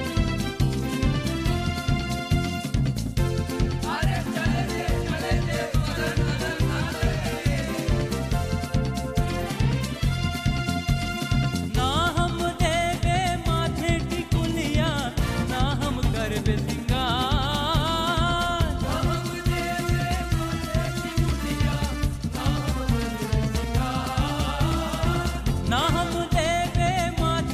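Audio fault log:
Nothing to log here, since no faults turn up anywhere in the audio.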